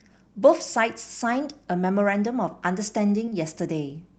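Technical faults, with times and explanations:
3.25 to 3.29 s and 3.29 to 3.33 s, short concealed packet loss: two back-to-back gaps of about 20 ms each never reached the decoder in time, so the receiver extrapolated the preceding sound, carrying its pitch forward or shaping noise to match, then crossfaded into the returning audio. Running together, they leave a smear or wobble lasting roughly 80 ms rather than a clean break, heard within Opus audio that is band-limited to 8 kHz.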